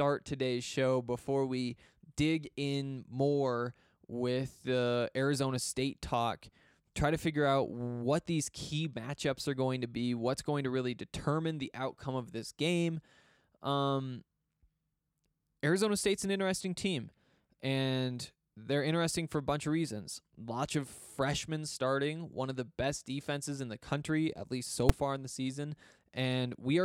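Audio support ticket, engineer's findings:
Single loud bang at 24.89 s, speech clip, between "country at least so" and "far in the season". Invalid numbers at full scale: a calculation stage produced infinite or invalid values that were forced to maximum output for a block of about 5 ms. The block is too short to hear separate onset and release pops, so it fuses into one hit. Unlike a clipping burst, there is no underlying sound through it, only a flat slab at one extreme value.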